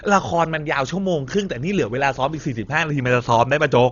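Throughout the speech, a transform codec starved of bits, likely Dolby Digital compression at a rate fitting about 32 kbps, has cut the band and left many frequency lines filled with noise, so nothing sounds above 6.9 kHz and the sound is dull, with heavy rough fluttering around tones.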